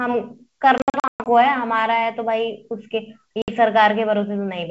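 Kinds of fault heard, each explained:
Packet loss on an ADPCM call: lost chunks become hard silences, around 0.78–1.29 s and 3.42–3.51 s, and speech returns slightly distorted as the decoder's predictor resyncs.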